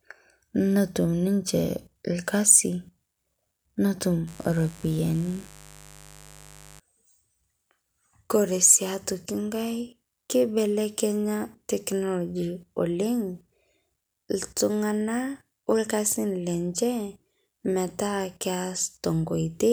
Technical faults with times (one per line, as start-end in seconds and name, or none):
4.27-6.80 mains buzz